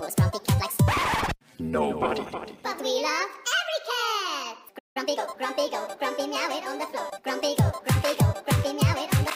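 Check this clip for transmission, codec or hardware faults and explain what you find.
Two faults occur close together around the five-second mark.

Playback stall, 4.78 to 4.97 s: the output drops to silence for about 170 ms mid-flow, then resumes. This is likely the player running short of data or having its output thread blocked, so nothing reached the output until it recovered.

Time-compressed catch-up, 4.97 to 5.29 s: immediately after the gap, the audio runs at 1.5 times normal speed while keeping its pitch. The player trims its backlog by removing small slices and cross-fading across the joins, which sounds hurried.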